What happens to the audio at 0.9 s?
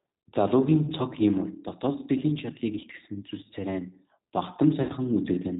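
From 0.85 to 0.91 s the speech breaks up from VoIP packet loss concealed by the speech codec, just before "цог хийморь дотоод сэтгэлийн". The gap fits a single lost 20 ms packet. With no new data, the decoder repeats its last pitch and vocal tract filter at falling gain, so the sound smears into a brief buzzy tone or coloured noise that fades. Because each frame builds on the previous one, the onset of the following words sounds weak or distorted until the decoder recovers.

This happens within the G.729 codec used throughout the clip, here the 8 kbit/s G.729A variant. It models speech as a vocal tract filter and pitch predictor excited by a few pulses per frame, and nothing above 4 kHz passes. The coding damage is plainly audible as a rough, synthetic quality, and that model is what the concealment extrapolates from during the lost stretch.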